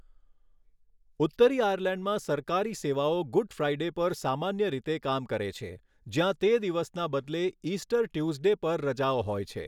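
At 5.56 s, just after "સામાન્ય રીતે કામ કરે", the speech has a single sharp click, likely from dropped samples: a handful of samples, about a tenth of a millisecond, missing, so the waveform jumps abruptly and the spectrogram shows one thin vertical line.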